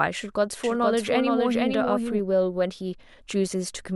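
From about 0.64 s to 2.20 s there's a doubled audio track: a second copy of the speech runs roughly half a second behind the original, a few dB quieter, clean and full-band with no room tail. It cuts in and out abruptly at those edges rather than fading. It sounds like an echo with no space around it, and is likely down to the signal being picked up again through a slower path and mixed back in.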